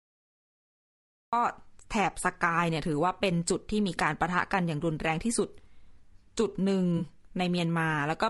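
The clip sits in digital silence until 1.33 s, then speech cuts in mid-sound with no attack: a classic cut-off start, as if the recording began late. From there the speech has a rough, grainy edge, with noise between harmonics and a thin, synthetic top, most likely low-delay AAC compression (AAC-ELD) at a lowish rate, around 32 kbps. At 6.97 to 7.02 s there's a 40 ms smeared, noisy patch, AAC frame loss with concealment, where the decoder papered over about two lost frames.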